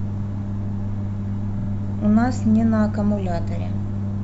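At 1.58 to 1.67 s, a run of compressed data was delivered more than once, causing repeated frames: the same 46.4 ms block plays twice more, which fits a pair of codec frames. The speech stutters briefly, and the clip runs 92.9 ms longer.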